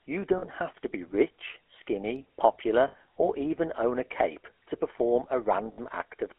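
Throughout, the GSM full-rate codec rebuilds the speech from a vocal-tract model and coarse pulse excitation, consistent with 13 kbps, leaving a buzzy, gravelly roughness within a 300 Hz to 3.5 kHz band. At 0.38 s, 2.88 s and 5.72 s, lost GSM frames are covered by repeating the last good frame, giving brief metallic rings of about 40, 60 and 60 ms.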